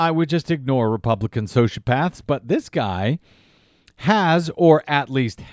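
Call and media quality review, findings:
No audible faults in the speech path; nothing to raise against capture, transport or playback.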